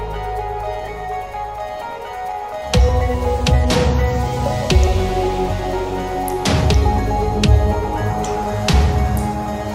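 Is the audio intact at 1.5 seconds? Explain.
No. At 1.5 seconds the audio carries faint, unevenly spaced hiccups and a slightly unsteady tempo, because it falls inside a run of repeated timing corrections from about 0.08 to 3.53 s. Throughout this stretch the receiver keeps trimming short pieces out of the stream, always in the same direction, which makes the playback run at roughly 104 percent speed. Each cut is small, so it registers as a slight stumble rather than a clear gap.

Those corrections come from clock drift between sender and receiver, which runs for the whole clip. The sender's audio clock runs fast, by something like 4 percent, so samples arrive quicker than the receiver plays them out. Its jitter buffer keeps filling up, and the receiver has to discard small slices to stop it overflowing. That constant catching-up is what produces the irregular timing around 1.5 seconds.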